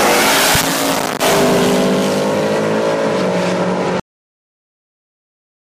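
A cut-off end arrives at 4.00 s: the sound stops abruptly mid-event and falls straight to digital silence for the remaining 1.78 s, with no natural decay or tail. The final buffers were never written or played out, so the audio simply ends.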